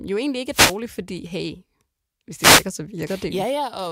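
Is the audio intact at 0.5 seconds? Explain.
No. A wireless microphone noise hit runs from 0.50 to 0.78 s: the FM radio signal fades, receiver noise rises, and a brief burst of static swishes over the speech.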